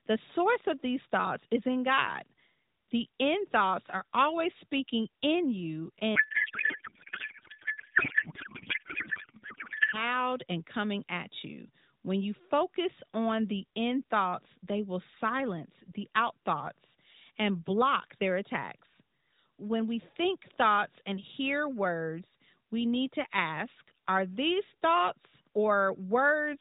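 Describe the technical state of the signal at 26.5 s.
At 26.5 s the speech is intact, with no fault present, only the closed-off top end above 4 kHz of the AMR narrowband mobile codec running at a rate that fits 12.2 kbps.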